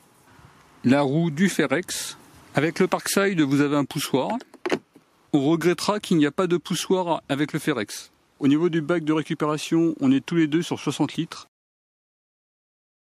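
No technical faults can be heard anywhere in the recording. Nothing in it calls for a timestamp or correction.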